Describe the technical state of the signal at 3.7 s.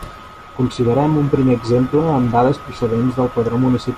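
At 3.7 s the speech signal is intact, with no audible technical fault at that point.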